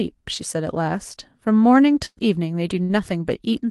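At 2.05 s there's a burst of packet loss. About 120 ms of speech was lost, so the receiver stretches and fades the last sound, then goes silent for 40 ms before skipping ahead. A shorter 60 ms burst at 2.83 s gets the same smeared fill.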